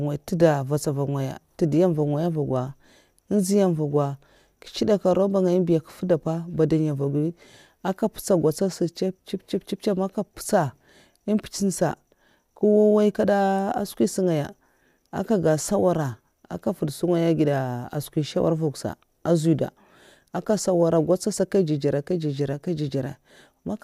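No technical faults can be heard anywhere in the speech.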